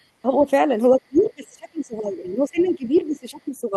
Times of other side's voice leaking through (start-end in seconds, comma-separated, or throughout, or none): 0.00-0.05, 2.61-2.69, 2.97-3.01